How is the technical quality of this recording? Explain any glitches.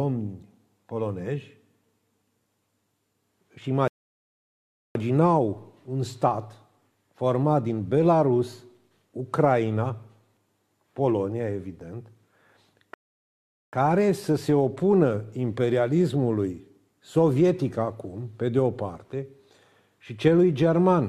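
The recording has two rebuffering stalls. At 3.88 s the audio stops dead and sits silent for about 1.07 s before resuming at 4.95 s; at 12.94 s a second silence of about 0.79 s follows, resuming at 13.73 s. Each time, playback ran out of downloaded data and waited. Unlike a dropout, which skips material, the sound picks up exactly where it halted, so nothing is missing, only time added.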